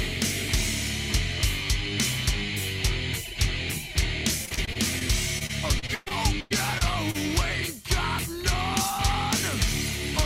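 Repeated packet loss (robotic sound) at 4.45–5.03 s and 5.39–7.16 s: short gaps, the longest 0.12 s, are patched by stretching the last sound, so the audio turns choppy, with pieces missing, rather than simply dropping to silence.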